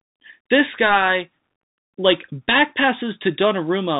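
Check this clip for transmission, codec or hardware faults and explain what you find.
The speech carries Bluetooth CVSD headset codec damage throughout, plainly audible. The codec sends one up-or-down bit per sample and adapts its step size, so fast high-level changes outrun it. Content stops near 3.8 kHz, s sounds turn scratchy, and granular hiss sits underneath, consistent with a 64 kbps link.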